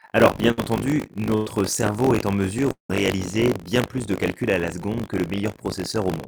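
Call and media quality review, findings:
Buffer tearing, whole clip. Robotic 50 Hz buzz on speech, which fits a 20 ms period. Playback ring buffer read and write overlap, so a small slice of each period replays audio about 40 ms old.

Burst of packet loss at 0.51–0.60 s and 1.35–1.49 s, the second just before "cerveau est en". Receiver concealment stretches the last sound as a fading buzz or hiss. About 60 ms and 100 ms of speech skipped.

Lost packet rebuilt from error correction at 0.57, 1.46 and 2.89 s, 20 ms each. Opus in-band FEC copy decoded at low bitrate. No gap, but rougher, noisier frames.

Long network dropout, likely cause, at 2.72–2.92 s, right after "cerveau est en". Concealment fades out, then about 120 ms of silence. About 180 ms of speech never played.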